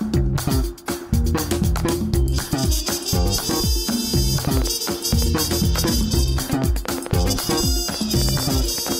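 From 4.45 to 8.93 s, a train of clicks, about twenty uneven pops near five per second, rises well above the sound, likely from interference, unlike random crackle.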